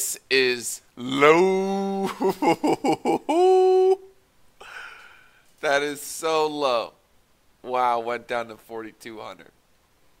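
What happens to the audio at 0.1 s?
Nothing goes wrong at 0.1 s; the audio is intact at that moment, with no fault audible.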